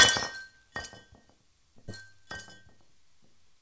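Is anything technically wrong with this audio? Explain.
Yes. At 1.88 to 1.90 s there is a skip ahead: roughly 0.7 s of sound was discarded, likely by an overflowing jitter buffer, and playback jumps straight to later material with no silence inserted. That missing filler is what separates it from a dropout, which leaves an audible gap.

From 2.01 to 3.56 s, a jitter buffer speed-up trims short pitch-period slices repeatedly, removing around 0.15 s in total so the sound runs at 110% speed and feels hurried. Unlike resampling, the pitch stays unchanged. Throughout, nothing is present above 8 kHz, which fits a G.722 call path.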